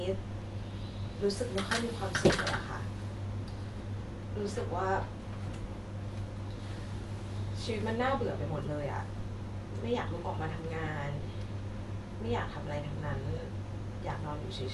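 Throughout the speech nothing is present above 11.4 kHz, and the sound is dull, with rough, fluttering noise around tones. The likely cause is Dolby Digital compression at a rate that fits 64 kbps. The encoder cut the band and left many frequency lines without bits, which decoding filled with dither noise.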